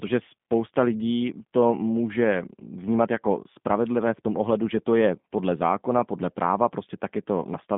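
From start to finish the speech passes through a G.729 codec, rebuilt from a vocal-tract filter and sparse pulses, which fits an 8 kbit/s stream. The damage is plainly audible as a rough, synthetic edge. A spectrogram shows a 150 Hz to 3.6 kHz band, empty above 3.7 kHz.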